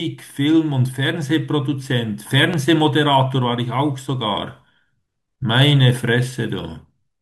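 A loud pop interrupts this speech recording at 2.54 to 2.56 s, a single sharp transient standing roughly 10 dB above the level of the talking, with the speech continuing underneath it. The cause is likely a sudden electrical step or pulse entering the signal chain, such as a connector being disturbed, a switch operating or a static discharge, which the downstream circuitry shapes into the brief thump heard here.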